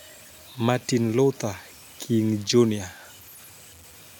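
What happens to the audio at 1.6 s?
At 1.6 s the sound is affected by low bit depth without dither, which runs through the whole clip. The likely cause is that the samples were truncated to about 7 bits with no dither, so the rounding error follows the speech itself. This produces a grainy, gritty distortion roughly 25 dB below the signal that shifts with every sound and is most obvious as the voice gets quieter. The room noise underneath sits about 42 dB below the speech.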